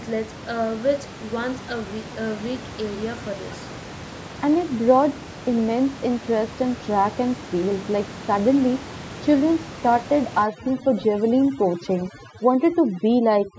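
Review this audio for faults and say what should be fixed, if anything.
Overdone noise removal sets in at 10.43 s and lasts to the end of the clip at 13.58 s. The noise reduction is acting too aggressively, cutting individual frequency bands whenever they sit close to its noise estimate, so the low-level parts of the speech are removed along with the room noise, which sits about 15 dB under the speech. The background drops and breaks up into twinkling specks. Lower the reduction strength or depth so the suppression stops short of the speech.

From 10.57 to 11.04 s, a delayed copy of the speech trails the original by about 104 ms, roughly 15 dB quieter. This is an echo leak, likely caused by the far side playing the call over a loudspeaker while its echo canceller failed to fully remove what its microphone picked up, so the residue was sent back down the line. The short, faint copy sits within the over-processed stretch. 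Having the far end use a headset, or retuning its echo canceller, would prevent it.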